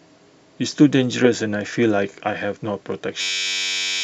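From 3.21 s, a system hang loop replays one 10.67 ms slice, which fits a 512-sample buffer, as a 93.8 Hz buzz, swallowing about 0.7 s of sound. The waveform shows identical repeating cycles, and a spectrogram shows flat harmonic lines every 93.8 Hz.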